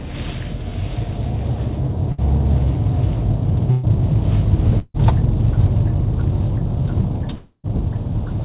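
Around 2.12 to 2.21 s, 3.71 to 3.86 s and 4.79 to 4.97 s you get a burst of packet loss. Each time a few packets went missing, so the receiver stretched the last bit of sound into a fading buzz or hiss, about 60, 120 and 150 ms of it. The last one dips into a brief silence before the sound jumps ahead past the lost stretch.

At 7.34 to 7.67 s there's a longer gap. The held sound fades for roughly 0.3 s, then about 80 ms of silence, and the audio picks up further on. That's likely a long network dropout. Throughout, nothing comes through above 4 kHz, which fits a G.711 call path.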